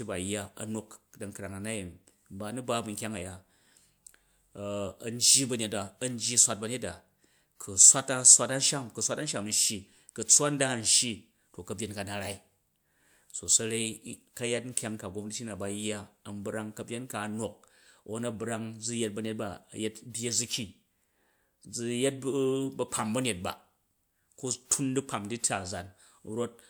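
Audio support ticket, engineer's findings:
Speech signal reviewed across the full clip, with no audible dropouts, distortion, noise or timing faults and no component implicated.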